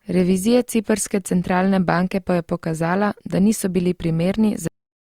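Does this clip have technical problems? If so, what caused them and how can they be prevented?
Yes. The speech has a cut-off end at 4.68 s: it stops mid-sound and drops straight to digital silence with no decay, because the final buffers were never written or played out. Prevent it by flushing and draining all buffers before closing the file or stream.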